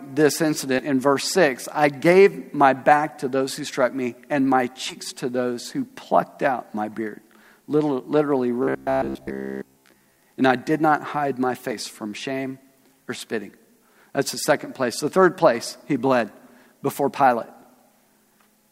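The audio has two separate problems. First, compressed frames are skipped at 0.78, 4.89 and 11.71 s. Each time it jumps forward: roughly 70 ms of material is missing at the first two points and about 40 ms at the third. That fits whole 10 ms frames being dropped, either missing from the file or rejected by the decoder as corrupt. Second, from 8.63 to 10.19 s the sound turns into a rigid, metallic buzz at about 66.8 Hz that still loosely follows the underlying audio. That's the robotic sound from repeated short buffers, likely caused by new audio arriving too slowly and the player repeating the last chunk to fill the gap. A repeat period of around 15 ms would force exactly that pitch, and most of that stretch, something like two-thirds or more, is repeated material rather than the real signal.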